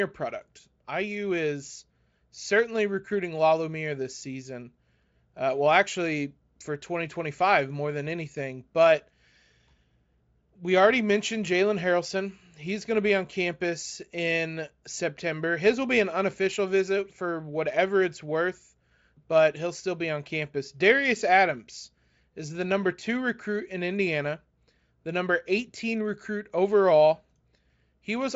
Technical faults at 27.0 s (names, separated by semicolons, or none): none